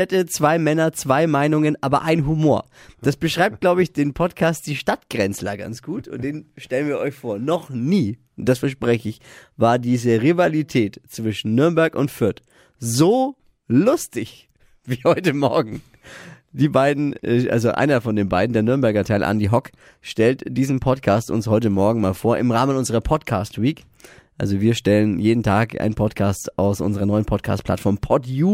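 A hiss roughens louder, brighter speech throughout and vanishes in pauses: sample clock jitter, with each sample taken a microsecond or two off time.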